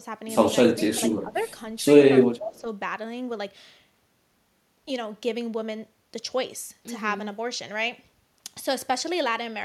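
From 0.68 to 1.4 s, the speech dips by about 10 dB in pieces, roughly half a second in total. This is speech suppressed in double talk. The likely cause is an echo canceller that could not separate the talker from loudspeaker echo and turned both down. At 1.39 to 1.43 s, a faint echo leak appears. It is a scrap of the voice delayed by 247 ms, about 40 dB below the speech. The likely cause is loudspeaker pickup that the canceller failed to remove. Two more double-talk dips follow, at 2.05 to 2.12 s by about 5 dB and at 2.37 to 2.67 s by about 10 dB. Another brief echo scrap, again 247 ms late and very quiet, sits at 2.56 to 2.6 s.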